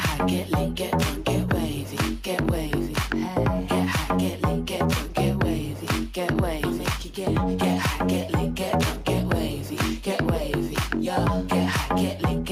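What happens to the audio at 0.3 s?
Nothing goes wrong at 0.3 s; the audio plays through that moment intact, with no dropout, click, glitch or other fault.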